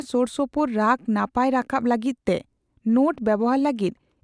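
No technical faults can be heard at any point in the speech recording.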